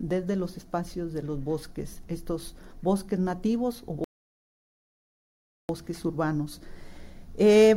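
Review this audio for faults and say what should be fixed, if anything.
At 4.04 s the sound drops abruptly into silence and stays there until 5.69 s, then picks up exactly where it broke off, with nothing skipped or repeated. This is a rebuffering stall: the player ran out of downloaded audio, halted playback while it waited for more data, and resumed once enough had arrived. No audio is lost, but about 1.65 s of dead air is added. To prevent it, buffer more audio ahead of playback or lower the stream's bitrate.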